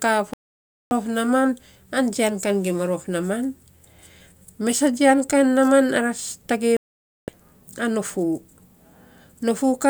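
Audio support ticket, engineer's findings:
Digital broadcast dropout: receiver lost lock or rejected frames on checksum and muted until valid frames resumed. Speech cut to silence at 0.34–0.92 s (about 0.58 s) and 6.77–7.30 s (about 0.53 s), after "ara tagei". Gap lengths fit whole lost frames. Content during gaps unrecoverable.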